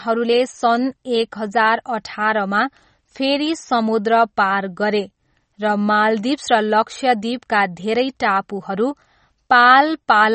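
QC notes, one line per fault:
Throughout: MP3 compression. The speech has nothing above 8.4 kHz and plainly audible codec damage: a watery, swirling texture, with s sounds turning metallic and chirpy and consonant onsets smeared. The likely cause is an encoder starved of bits, which fits a low bitrate around 32 kbps. It cuts the treble at a fixed point and keeps dropping weak frequency lines in and out from frame to frame. That flickering is what separates it from a simple low-pass filter, which dulls the sound without any swirl.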